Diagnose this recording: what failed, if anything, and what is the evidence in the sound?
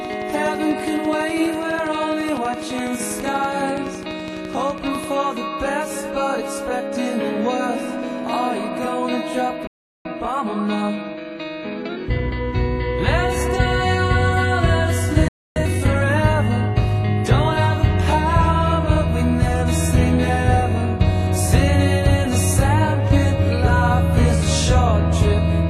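The first five seconds, from 0.05 to 5.05 s, carry a train of clicks: a steady tick at a regular 12 per second, roughly 70 of them, peaking around 5 dB above the programme and audible through the quieter moments too. That even spacing and identical shape point to something periodic injecting pulses, likely interference coupling into the analogue wiring or an interface struggling at the driver level, rather than anything in the content.

There are two playback stalls, each a clean dropout to silence in mid-flow: one at 9.67 s lasting about 0.38 s, and one at 15.28 s lasting about 0.28 s. The sound simply halts, then picks up again. That's the playback stage starving, most likely a buffer running dry or the output thread getting blocked, so nothing reached the converter until it recovered.

Right after each stall you get time-compressed catch-up. From 10.05 to 12.57 s the audio runs about 1.15 times fast, and from 15.56 to 16.10 s it's harder, about 1.5 times. 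Pitch stays put but it sounds rushed. The player is clawing back its backlog by trimming small slices and cross-fading the joins, which is why the second, shorter burst sounds more hurried.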